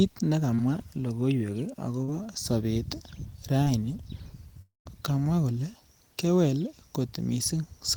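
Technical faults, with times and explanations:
0.55–0.60 s, 2.04–2.10 s and 3.64–3.68 s, short concealed packet loss: at each point a small piece of the speech, about 20 ms, 40 ms and 20 ms, failed to arrive in time. The receiver bridged each hole by extending the sound just before it, carrying on its pitch or its noisy texture, then cross-fading back to the real signal. The result is a brief smear or slight wobble, and a short consonant falling in the hole can go missing.
4.62–4.87 s, long network dropout: roughly a quarter of a second of audio, about 240 ms, never reached the listener, most likely because the network stopped delivering packets for that stretch. The receiver first stretched the last sound into a fading buzz or hiss, and then about 160 ms of near-silence remains before speech resumes at "kamwa kole kewel". Whatever was said inside the gap is lost rather than delayed.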